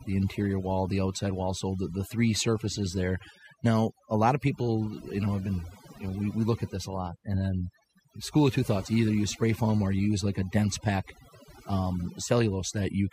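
Throughout this speech recording, the gaps between phrases drop to an unnaturally dead hush dotted with chirping, glittering fragments. That is overdone noise removal: a noise reduction process applied too aggressively pulls down any frequency band that sits close to its noise estimate, so the quieter components of the speech are stripped out along with the noise, leaving isolated musical specks behind.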